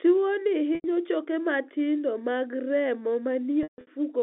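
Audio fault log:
0.75–0.84 s, packet loss with pitch repetition: about 90 ms drops out just before "choke matindo mag remo", so the decoder loops the last pitch period to cover it. You hear a brief held, buzzy note, which fits roughly three lost packets.
3.63–3.87 s, packet loss with pitch repetition: right after "choke matindo mag remo", 210 ms goes missing in bits over 240 ms. The 150 ms run is long enough that the repeated period fades to silence before the speech cross-fades back in over the narrow telephone band.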